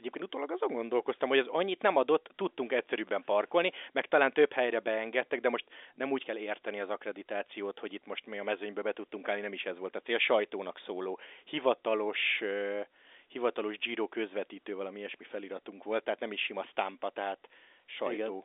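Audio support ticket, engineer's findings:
No faults found in this speech recording. Band-limited telephone sound consistent with G.711 coding, roughly 250 Hz to 3.6 kHz, with nothing above about 3.7 kHz.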